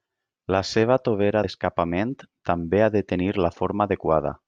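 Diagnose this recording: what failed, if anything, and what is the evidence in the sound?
Codec stage: damaged data in a compressed stream at 1.43 s makes a brief blip as the decoder loses sync, visible as a narrow broadband vertical streak.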